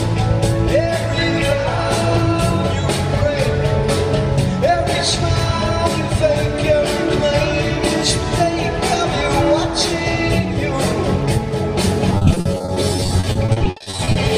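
Repeated packet loss (robotic sound) from 12.11 to 14.16 s: dozens of dropouts up to 60 ms, patched by repeating prior sound, make roughly two-fifths of the stretch choppy.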